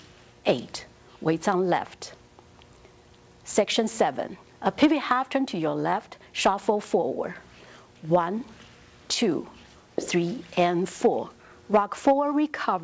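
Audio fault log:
Nothing to log here, since the audio just comes through a call path that sounds like wideband G.722 at 64 kbps, with nothing above 8 kHz, exactly as that path should.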